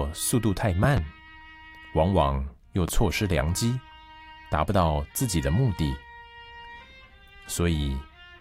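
A loud pop, a double one, hits between 0.84 and 1.0 s, about 15 dB above the sound, and a single one follows at 2.88 to 2.91 s, about 10 dB up. Both are likely voltage glitches from a switch or static, showing as sharp waveform spikes and vertical broadband spectrogram stripes.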